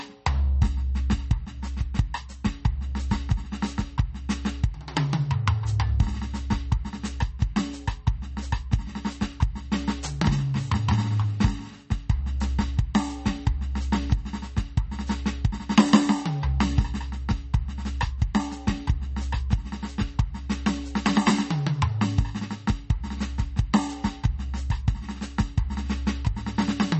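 The music sounds watery and swirly throughout, with metallic chirping on cymbals, smeared attacks and nothing at all above 8.4 kHz. The damage is plainly audible and points to heavy MP3 compression, likely at a low bitrate around 32 kbps, where the encoder cuts the treble and lets weak frequency lines flicker on and off between frames.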